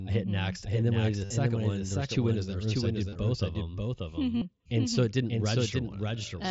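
Speech carried over a Bluetooth headset using the mSBC codec, which limits it to about 8 kHz with light grain on louder passages, suffers a doubled audio track, most likely from a second, slower capture path or an edit holding two copies out of step. A full-band copy about 5 dB quieter trails the original by roughly half a second throughout, with no decay or room colour. Every syllable is shadowed by a flat, dry repeat. Concealed Bluetooth headset packet loss also occurs. The receiver filled the gaps by repeating the best-matching slice of recent waveform. The first gap runs from 1.25 to 1.30 s (about 52 ms lost) and the third from 4.37 to 4.42 s (45 ms). Each turns into a brief buzzy tone at full level, with a slight warble as real sound resumes. At 3.09 to 3.16 s the loss is scattered, with the longest run about 30 ms.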